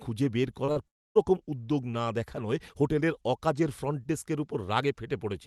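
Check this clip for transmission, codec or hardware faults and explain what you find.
Yes, two kinds of transmission fault are audible in this speech, all within the first 1.2 seconds.

Short concealed packet loss occurs twice, from 0.65 to 0.70 s and from 0.72 to 0.78 s. Late packets were patched by extending the preceding sound, leaving brief smears.

From 0.88 to 1.17 s, the sound buzzes briefly, fades, then goes silent before resuming with material gone. This is likely a long network dropout.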